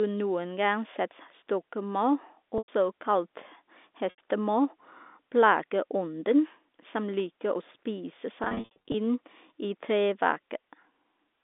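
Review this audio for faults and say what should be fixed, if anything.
Packet loss with pitch repetition at 2.58–2.68 s, 4.10–4.18 s, and scattered from 8.44 to 8.94 s between "å spise" and "inn i". The concealment repeats the last pitch period, giving brief buzzy holds. Fixing the network path or adding a larger jitter buffer and forward error correction should stop it.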